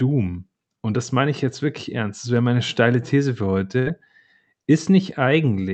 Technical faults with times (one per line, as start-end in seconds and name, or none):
3.79-3.89 burst of packet loss